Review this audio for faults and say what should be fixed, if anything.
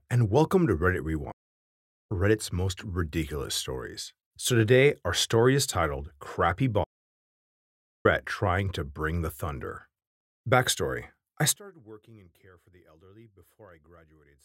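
Playback stall, 1.31 to 2.12 s and 6.83 to 8.06 s: the speech cuts out mid-flow into silence for about 0.79 s and then about 1.21 s before carrying on. Gaps this long most likely mean the player's buffer ran dry or its audio thread was held up, so nothing reached the output until data flowed again. Prevent it by giving playback a deeper buffer and running the audio thread at higher priority.

One channel inverted, 11.56 s to the end: the speech abruptly drops by about 27 dB and becomes faint. This fits one stereo channel likely having its polarity flipped. When the two channels are summed to mono, the centred speech they share cancels, leaving only the small differences between them. Prevent it by checking channel polarity and running a mono-compatibility check before the mix is exported.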